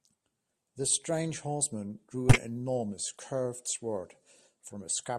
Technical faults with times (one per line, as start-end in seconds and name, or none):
2.28-2.42 corrupt frame decoded
3.65-3.70 corrupt frame decoded